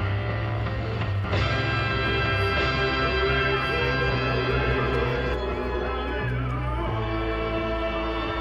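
A doubled audio track runs from 1.24 s to 5.34 s: a second, full-band copy of the sound trails the original by about one and a half seconds, at roughly the same loudness. It carries no reverberant tail or room colouring and cuts in and out abruptly at those edges. The likely cause is the same signal being captured again through a slower path, so two out-of-step copies are mixed together.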